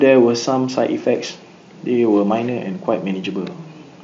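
Nothing goes wrong anywhere in this speech, which comes over a Bluetooth mSBC headset link that passes nothing above about 7.7 kHz, with a faint room noise sitting about 41 dB below it.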